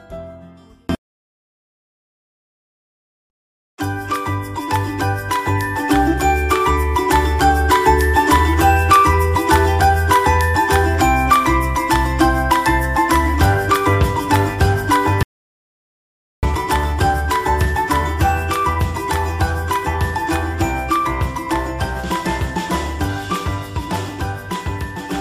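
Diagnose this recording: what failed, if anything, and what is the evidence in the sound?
An audio dropout to silence runs from 15.23 s to 16.43 s, about 1.2 s long. The sound stops abruptly mid-flow and returns just as abruptly. The gap is silent, with no room tone or noise floor underneath. The failure is likely at the input stage, such as a lost device connection, a broken link or a brief mute, while the recorder kept writing silence. Whatever occurred during that stretch is gone.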